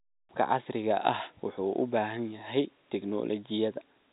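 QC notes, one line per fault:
No faults heard in this telephone-band speech.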